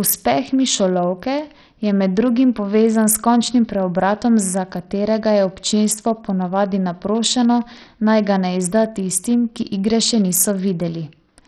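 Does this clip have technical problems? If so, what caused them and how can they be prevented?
Yes. Throughout the speech, the likely cause is Bluetooth SBC compression running with a very small bit pool, with the heavy damage pointing to a rate of about 64 kbps. SBC splits the signal into a few wide sub-bands and shares out bits without any model of hearing, so the weak upper bands are starved and the rest are coarsely quantised. The treble thins and flickers, and a gritty, aliased roughness sits on the speech. Sending the audio over a higher-quality codec or a wired connection would prevent it.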